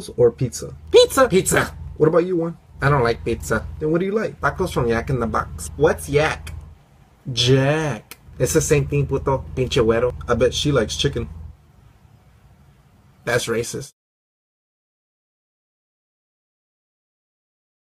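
No technical faults occur at any point in the audio.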